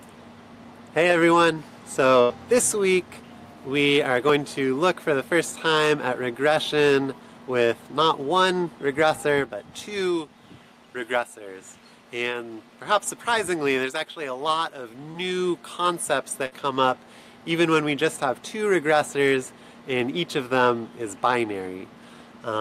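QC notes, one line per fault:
2.21–2.32 s and 16.46–16.53 s, burst of packet loss: a run of consecutive packets never arrived in time, about 80 ms at the first point and 60 ms at the second. The receiver bridges each gap by extending the last sound it had and fading it down, which is heard as a brief held buzz or fading hiss. The audio then jumps ahead, so the stretch that was lost is simply absent when playback resumes.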